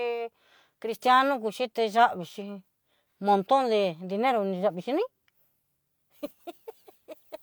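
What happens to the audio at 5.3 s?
Nothing goes wrong at 5.3 s; the speech there plays through intact, with no dropout, click, distortion or glitch.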